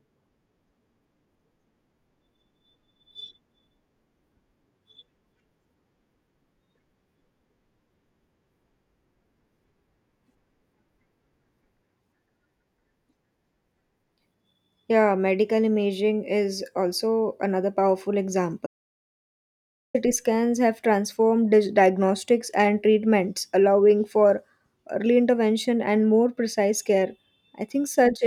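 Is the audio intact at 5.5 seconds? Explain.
Yes, the audio at 5.5 seconds is intact, with no dropout, click, distortion or other fault at that moment.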